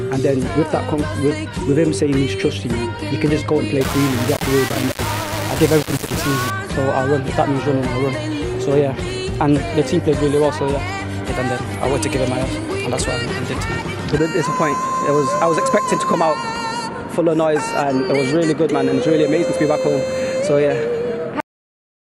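From 3.81 to 6.5 s the audio turns coarse and gritty. This is low bit depth without dither. The signal sounds as if squeezed into about 4 bits and rounded, with no dither to smooth the steps. So the error tracks the signal itself. Grain rises and shifts with the sound, and the quietest parts sputter or drop out. The distortion sits only about 10 dB below the signal. A likely cause is a crude requantisation stage.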